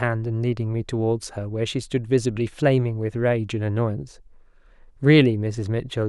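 A speech recording with no audible technical faults: the level holds steady, nothing drops out or breaks up, and the signal stays continuous throughout.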